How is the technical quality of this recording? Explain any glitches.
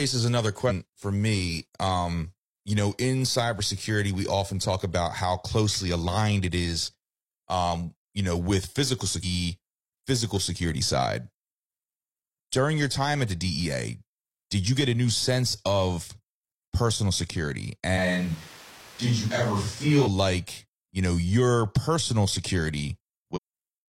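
The recording has two kinds of technical fault: three short compressed-stream glitches and one brief stretch where the speech turns distant.

Damaged data in a compressed stream, at 0.65–0.72 s (just before "for me"), 9.20–9.25 s (just after "you know with physical") and 23.32–23.38 s: corrupted bytes make the decoder lose frame sync, producing a brief chirp or blip.

Switch to a distant microphone, 17.99–20.05 s, between "personal security" and "like you know": the speech suddenly sounds roomy and hollow, thinner in the bass, with background noise roughly 25 dB below it, though the level stays about the same. This is likely a switch to a microphone farther away, ending just as abruptly.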